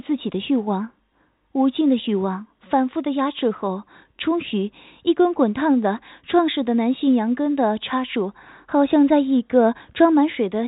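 The speech shows no technical faults; it has been carried through G.711 mu-law telephone coding at 64 kbps, which limits it to the telephone band below 4 kHz as that format does by design.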